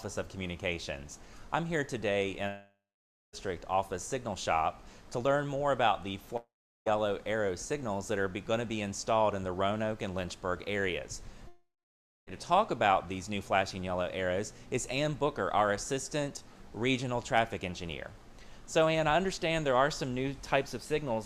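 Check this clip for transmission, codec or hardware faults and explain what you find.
Three gaps stand out, each most likely a long network dropout, at 2.47 to 3.35 s, 6.37 to 6.88 s and 11.48 to 12.29 s. The stream stopped delivering audio, so the receiver stretched the last sound into a fading buzz, then silence for 0.54, 0.38 and 0.57 s. Sound resumes with 0.86, 0.5 and 0.8 s missing.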